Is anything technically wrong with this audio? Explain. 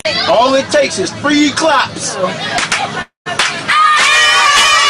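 Yes. From 3.02 to 3.28 s there is a call audio freeze, most likely because packets were delayed in transit and the receiving jitter buffer ran dry. The receiver bridged the wait by extending the last sound into a fading buzz or hiss that drops to silence for about 140 ms of the 0.26 s stall. When the packets arrived, the audio resumed where it had stopped, so nothing is lost, but everything after plays about 241 ms later.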